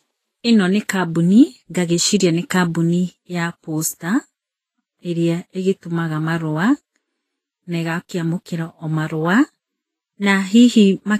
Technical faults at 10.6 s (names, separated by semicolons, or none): Vorbis compression